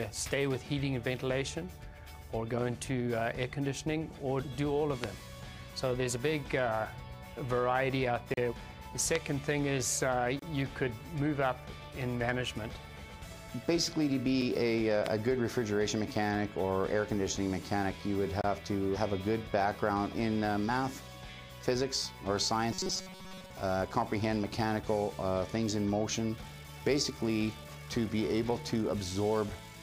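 Three loud pops, single sharp clicks around 20 dB above the audio, land at 5.04, 9.15 and 15.06 s, likely voltage spikes from a plug, switch or static discharge. Gaps between stream segments cut hard-edged silences into the sound at 8.34 s (35 ms), 10.39 s (30 ms), 14.42 s (4 ms) and 18.41 s (26 ms). These are timestamp mismatches at what appear to be 2-second segment boundaries, with nothing lost. From 22.73 to 23.50 s the audio turns into a rigid, metallic 188 Hz buzz, robotic sound from repeated short buffers. This is likely from a starved buffer replaying its last 5.3 ms, with most of that stretch replaced by repeats.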